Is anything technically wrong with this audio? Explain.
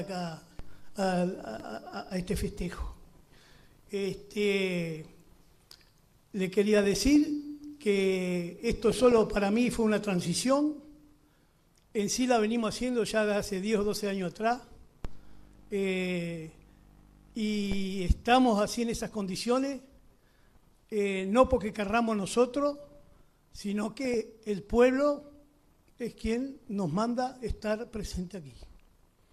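Yes, there's DAB burbling in four short bursts: 6.78 to 7.16 s, 8.89 to 9.18 s, a brief one at 24.05 to 24.14 s, and 28.62 to 29.0 s. Weak reception lets bit errors, a few in a thousand at worst, slip past error correction into the MP2 data. Corrupted samples put short blips of noise into single sub-bands, and corrupted scale factors make sub-bands jump in level for up to a frame, so each burst comes through as burbling over the audio.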